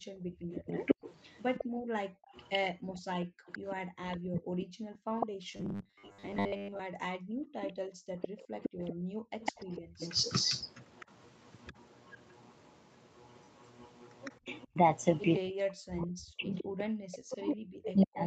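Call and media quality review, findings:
Background gated by the echo canceller, 0.0–9.99 s: room tone dips up to about 40 dB while the far end plays, roughly five seconds affected in total; canceller clamping the microphone.

Echo leak, 0.51–11.73 s and 14.25–18.27 s: delayed copy of the speech 158 ms behind, about 5 dB below it early, about 15 dB below later; likely incomplete cancellation at the loudspeaker side.

Robotic sound from repeated short buffers, 5.52–6.80 s: rigid metallic 100 Hz buzz over most of the audio; likely late packets concealed by looping, which fits a 10 ms buffer.

Speech suppressed in double talk, 9.25–9.29 s and 14.46–18.27 s: near-end speech cut by up to roughly 40 dB under overlapping far-end audio; likely the echo canceller suppressing both sides.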